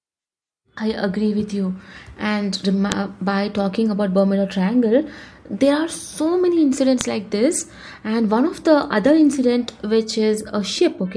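Separately recorded pieces of speech were joined without stripping their WAV headers, so those header bytes were played back as samples. The result is a sharp, loud click at 2.92 s, just before "by talking about", and again at 7.01 s, between "there are so many" and "like this".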